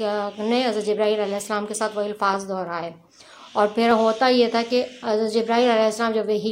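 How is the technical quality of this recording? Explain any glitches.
There is one glitch, a single sharp click at 2.67 s. It is brief and thin, a tick rather than a gap, and nothing in the sound goes missing around it. On a spectrogram it would show as a narrow vertical line across the frequency range. The likely cause is dropped samples: a fraction of a millisecond of the stream vanished, so the waveform leaps straight from one value to a later one, and that abrupt step is the click.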